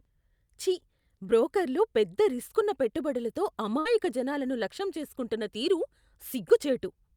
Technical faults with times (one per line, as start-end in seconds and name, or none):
3.79-3.88 burst of packet loss